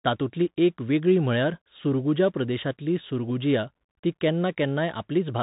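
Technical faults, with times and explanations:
Throughout, Bluetooth CVSD headset codec: the speech has passed through the narrowband headset link, which encodes each sample as a single up-or-down bit with an adapting step size. The result fits a 64 kbps CVSD stream. Nothing above about 3.8 kHz survives, so the speech sounds boxed in and dull. Loud, fast-rising sounds outrun the step and distort, s sounds turn scratchy, and a granular hiss sits under the speech.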